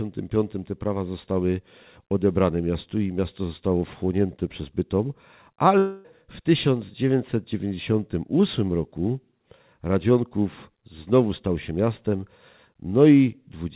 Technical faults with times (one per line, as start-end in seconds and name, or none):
5.78-6.06 long network dropout